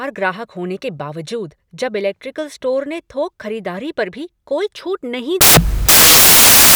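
From 5.41 s to the end at 6.76 s, the samples are built from the wrong bytes. The reader misassembles each speech sample's bytes, so the rapidly fluctuating low bits dominate. The sound becomes loud, harsh broadband noise, close to white on the loud sounds.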